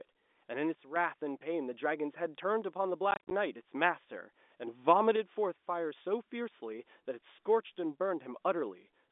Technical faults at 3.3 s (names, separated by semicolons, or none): packet loss filled with silence